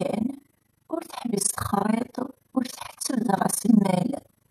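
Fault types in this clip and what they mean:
Overlap-add ripple: the speech was split into windowed frames and rejoined with overlaps that don't sum to a steady gain. The level dips by about 60 dB once per frame, around 30 times a second, all the way through, giving a harsh, fast flutter.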